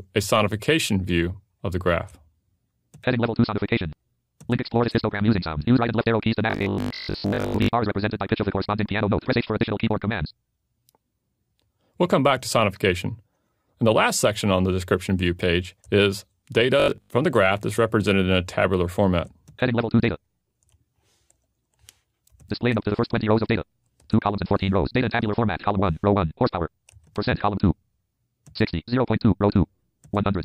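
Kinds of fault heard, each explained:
Robotic sound from repeated short buffers: a rigid metallic 50 Hz buzz at 6.50–7.68 s and 16.80–17.10 s, likely from a 20 ms block replayed over most of the audio.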